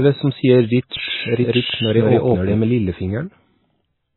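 Throughout the speech, nothing is audible above 4 kHz. The sound is watery and swirly, with smeared attacks. This is likely heavy MP3 compression, which fits a very low bitrate near 16 kbps. From 0.97 to 2.55 s, a doubled audio track appears. A second full-band copy, roughly as loud as the original, trails it by about 150 ms. It is likely an out-of-step duplicate and has no room decay. It starts and stops abruptly.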